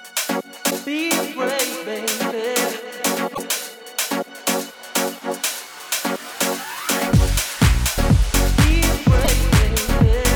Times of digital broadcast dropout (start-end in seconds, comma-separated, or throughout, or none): none